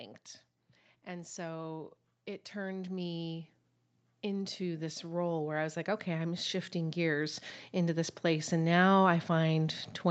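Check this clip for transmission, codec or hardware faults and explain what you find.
One real fault here, a gain problem rather than a codec one. From 4.21 to 8.8 s you get automatic gain rising: the AGC decided the speech was too quiet and pushed gain up about 10 dB, so voice and background swell together. The top end stops around 8 kHz, which is just the call path's bandwidth.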